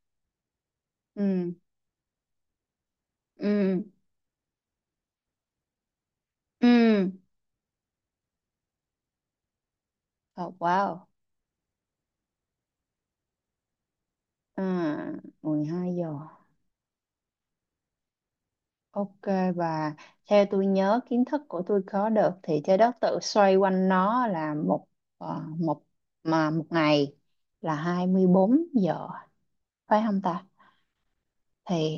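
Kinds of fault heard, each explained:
No technical faults can be heard in this speech recording, and the signal shows no dropouts, distortion, noise bursts or timing disturbances anywhere along its course.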